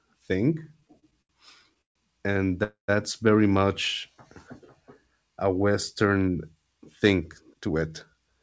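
Speech that catches and drags between 0.64 and 1.97 s, halting thirteen times with the longest hold lasting 139 ms. This is repeated stalls (stutter): packets kept arriving late, so the jitter buffer kept running dry. Each time, the receiver stretched the last sound to cover the wait, filling about a quarter of that span, with nothing lost. At 2.63 s the sound hangs as a fading buzz or hiss and then 120 ms of silence before resuming at "very much" at 2.90 s. This is a call audio freeze, likely caused by packets held up in transit. The receiver inserted 247 ms of filler and continued exactly where it stopped, pushing everything after it later. From 6.05 to 7.83 s the speech sounds hurried, running at 110% speed with unchanged pitch. This is a jitter buffer speed-up: having built up excess audio, the receiver trimmed many pitch-period-sized slices, about a fifth of a second in total, to reduce the delay. 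Throughout, the call path leaves nothing above 8 kHz, which fits a G.722 wideband codec.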